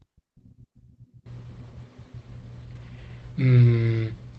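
At 2.71 to 2.77 s and again at 3.57 to 3.59 s, there is a lost packet rebuilt from error correction. The Opus decoder filled each gap with the low-bitrate redundant copy, so playback never drops out. Those stretches sound briefly rougher and noisier.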